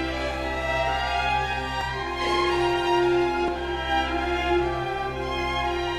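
Music, with two audible skips at 1.81 s and 3.48 s, where roughly 20 and 30 ms vanish, likely dropped buffers (overrun) splicing the audio directly together.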